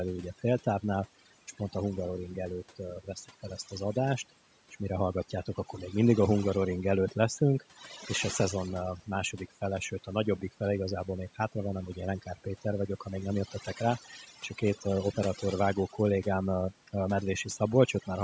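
Overdone noise removal runs through the whole recording. The suppressor was pushed hard enough that any frequency band sitting close to its noise estimate gets driven down or muted, taking the quieter parts of the speech with it. The gaps fall to near silence sprinkled with twinkling specks. A spectrogram shows a patchy, moth-eaten texture with isolated bright dots in the pauses, over a band that ends at 8 kHz as call audio does.

Speech cut by the noise suppressor follows at 7.6 to 8.04 s, 13.48 to 13.77 s and 14.27 to 14.86 s. At each point the suppressor misreads part of the speech as noise and pulls it down with the background, by up to about 8 dB in the first two and about 9 dB in the third. Roughly a sixth of a second in each span is affected, so the speech there comes out swallowed or faint. The waveform shows the envelope sagging, and the spectrogram shows faint, hollowed-out energy there.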